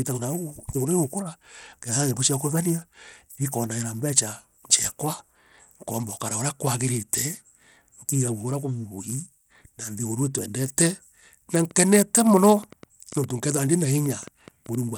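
Bluetooth SBC compression runs through the whole speech clip. The treble thins and flickers under a gritty haze, likely from SBC starving its upper sub-bands of bits, which fits a bitrate around 96 kbps.

A train of clicks follows from 11.71 to 14.76 s: about fifteen ticks, unevenly spaced at roughly 4.3 per second and about as loud as the speech, likely from interference or a struggling interface.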